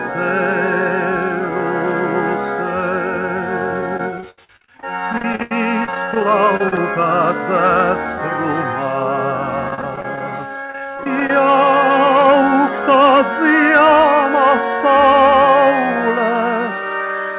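Repeated packet loss (robotic sound) occurs at 3.81–6.78 s and 9.69–11.30 s. Many short holes, up to 82 ms, are refilled from preceding sound, leaving choppy audio with pieces missing.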